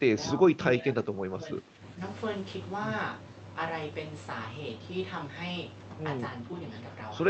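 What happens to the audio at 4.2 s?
Nothing goes wrong at 4.2 s: the speech carries on intact through the call path, with only the ordinary Opus coding character and no dropout, glitch or distortion at that moment.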